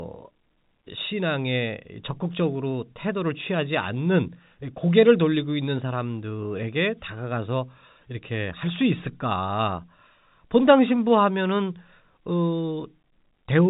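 No faults detected; the speech carries the narrow band of G.711 telephone coding, with nothing above 3.8 kHz.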